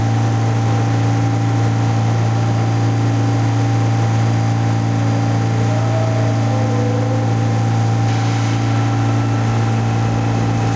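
Sounds over a call link; no faults are audible.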